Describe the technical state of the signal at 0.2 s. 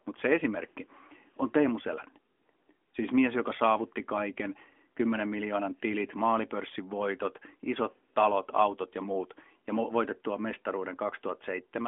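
At 0.2 s the signal is intact with no fault present, only the band limit of the AMR narrowband mobile codec path, which passes nothing above 3.6 kHz.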